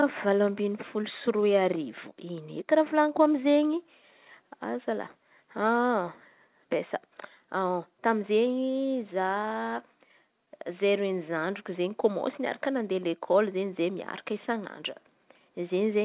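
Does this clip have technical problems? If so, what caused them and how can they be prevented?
No, this clip has no technical problems, so there is nothing to prevent.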